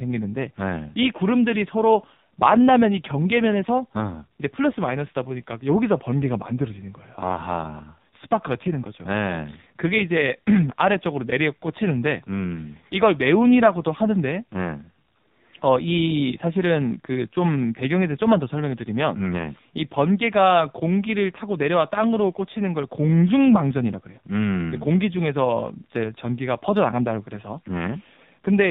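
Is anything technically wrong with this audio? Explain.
Yes, the speech carries AMR narrowband mobile codec damage throughout. Beyond the cut above 4 kHz, it sounds buzzy and synthetic, which a plain low-pass filter wouldn't cause, and fits a low mode near 5.9 kbps.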